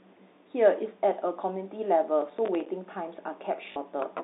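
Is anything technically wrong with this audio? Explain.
Yes, two faults stand out in this telephone-band speech, which is carried as G.711 mu-law and limited to roughly 250 Hz to 3.7 kHz.

From 2.22 to 2.69 s there is processor overload crackle. The processor repeatedly failed to deliver audio buffers on time, and each miss was filled with silence. The resulting string of hard-edged dropouts, around ten of them with spacing that fits a buffer of about 5 ms, produces a gritty crackle over the speech that stops once the load clears.

From 3.72 to 3.76 s there is packet loss with the last packet repeated. About 40 ms of audio went missing, which fits two lost 20 ms packets. The receiver replayed the previous packet to fill the gap, so the result is a brief robotic stutter with a buzz near 50 Hz.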